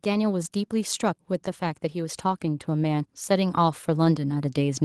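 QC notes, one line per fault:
0.05–4.84 s, automatic gain rising: the level creeps upward from the start and keeps climbing to the very end, with the speech and the room noise beneath it swelling together rather than the voice simply getting louder over a steady floor. That joint rise is the signature of an automatic gain control that judged the incoming signal too quiet and kept raising its gain step by step, lifting everything in the signal path at once.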